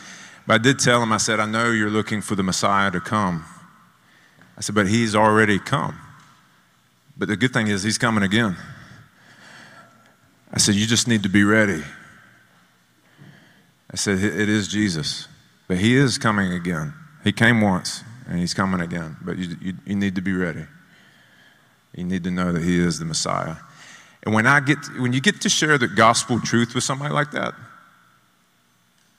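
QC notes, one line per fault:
5.24–5.43 s and 25.71–26.11 s, hard clipping: a brief crackle on the loudest peaks, harsher in the second run. The speech overran the level limit by about 1 dB, then about 3 dB, so peak tops were sliced flat, adding high harmonics.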